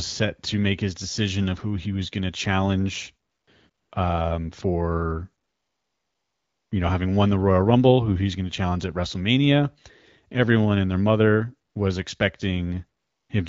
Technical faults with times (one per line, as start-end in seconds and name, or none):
3.29-3.91 AMR comfort noise
5.43-6.71 AMR comfort noise
11.69-11.75 AMR comfort noise
12.99-13.29 AMR comfort noise